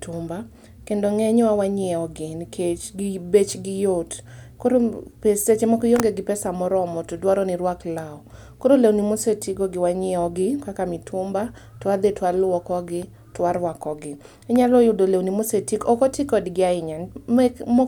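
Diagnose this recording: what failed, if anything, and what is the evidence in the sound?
Nothing failed here, and the sound of this speech recording carries no evidence of a fault at any stage.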